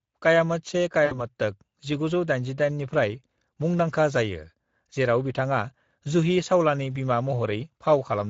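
It's a speech clip carrying the Speex codec the whole way through, and the damage is plainly audible. The voice has that grainy, hoarse CELP edge you get when the excitation is starved of bits, so the speech turns noisy rather than clean. The overall character fits a mid-rate Speex setting somewhere around 16.8 kbps. At 1.05 s there's a VoIP packet loss concealed by the speech codec, running to about 1.16 s. That gap is about 60 ms, which is consistent with three lost 20 ms frames. The decoder keeps extrapolating from its last pitch and filter with the gain sinking each frame, so you hear the voice stretched into a buzzy tone or coloured noise that fades. Because each frame leans on the previous one, the speech stays weak and warped for a short stretch after the packets come back.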